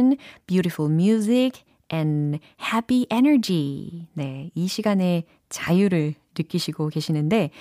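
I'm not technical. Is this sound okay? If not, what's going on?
Yes, this one's fine; nothing in the recording is going wrong, so there's nothing here to worry about.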